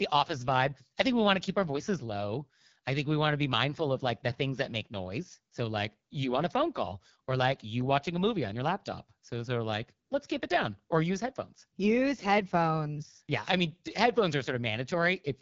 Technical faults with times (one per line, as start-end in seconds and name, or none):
0.00-15.41 AMR wideband (HD Voice) codec